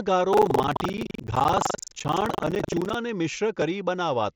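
Speech, with buffer tearing from 0.30 to 2.95 s: the writing program and the playback hardware slipped out of step, so each buffer is read partly stale. Roughly a fifth of every period carries audio from about 150 ms earlier, spliced in with hard joins, producing a robotic 23.4 Hz buzz, which fits a 2048-sample buffer. The mSBC headset link carries the sound with nothing above 8 kHz.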